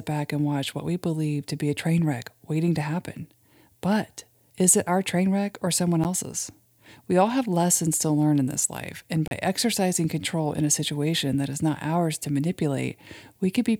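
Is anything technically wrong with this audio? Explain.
Yes. There are two blocks of digital silence.

At 6.04 s, an 11.6 ms gap, which fits a 512-sample buffer, comes across as a tick or dip. From 9.28 to 9.31 s, a 35 ms gap leaves a short hole. In both, zeros replaced the audio, either because the output buffer wasn't filled in time or because a calculation produced invalid numbers. The sound cuts out and back with no fade. A waveform shows each as a flat line, and a spectrogram as a narrow, empty vertical strip.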